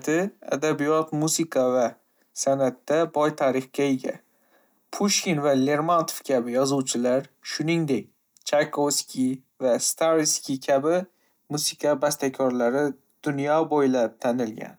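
No technical faults are audible.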